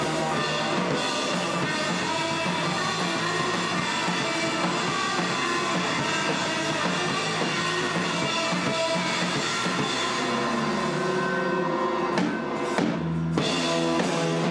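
Nothing stood out as a technical fault anywhere in the recording on listening.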